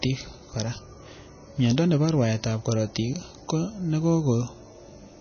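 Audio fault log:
Throughout: MP3 compression. The speech has nothing above 6.5 kHz and a plainly audible watery, swirly texture. Weak frequency lines drop in and out between frames and s sounds chirp metallically, likely from an MP3 encoder starved of bits, consistent with roughly 24 kbps.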